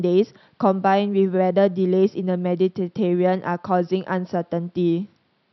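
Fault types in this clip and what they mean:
No technical faults can be heard in the signal; the only background is the room's own noise, sitting about 47 dB below the speech.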